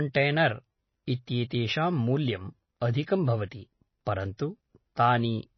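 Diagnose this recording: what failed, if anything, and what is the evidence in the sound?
The codec stage is at fault. The speech has plainly audible MP3 compression damage throughout: a watery, swirly texture and dull, smeared consonants. On a spectrogram there is a hard ceiling with nothing above 6 kHz, and the band below it is speckled with small blocks that flicker on and off between frames. The encoder was likely starved of bits and discarded the treble and the weak spectral lines, which fits a very low bitrate around 24 kbps.

A pre-echo, also from the codec, sits at 4.37 s. A short hiss of about 17 ms comes just before a sharp onset, which then sounds softened. In the waveform, low-level noise rises ahead of the attack rather than from silence. On a spectrogram it shows as a broadband smear leading the transient's edge. The quantisation noise sized for the loud attack was spread across the whole transform block, including the quiet moment before it.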